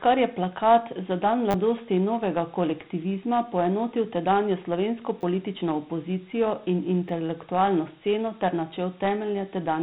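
Throughout, the speech has been squeezed into Dialogic VOX ADPCM, consistent with 32 kbps, leaving gritty hiss trailing the speech and nothing above 3.9 kHz. At 1.51–1.54 s, 5.21–5.23 s and 7.09 s, a repeated buffer occurs: fresh audio arrived late, so a 10 ms slice replayed three, two, then once, giving brief buzzy stutters.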